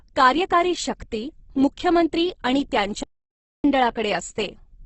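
Throughout the clip the speech sounds rough and grainy, with nothing above 8.2 kHz. This is likely Opus compression at a very low rate, around 12 kbps, and it gives noisy texture rather than MP3-style swirl. From 3.03 to 3.64 s the output goes silent for about 0.61 s, likely a playback stall. That is a mid-flow halt far longer than a brief click-like dropout.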